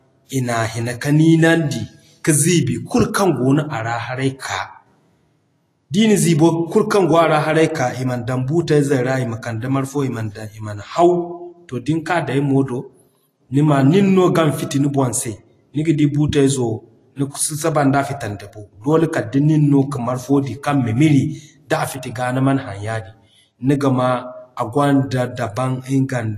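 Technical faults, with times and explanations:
Throughout: Vorbis compression, likely at around 32 kbps; treble is grainy and hissy, nothing above 14.2 kHz, a hard ceiling on the spectrogram.
4.39–4.42 s: pre-echo, a 33 ms smear of hiss before an attack, seen as broadband noise leading the transient's waveform onset.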